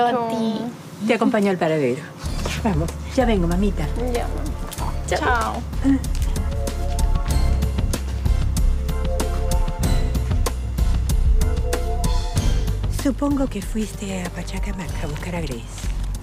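Dropped samples at 14.42 s: the waveform most likely jumps ahead after losing a couple of samples, a tiny fraction of a millisecond of signal. Nothing audible goes missing, but the sudden step in level produces one sharp click, a thin vertical line across the spectrum.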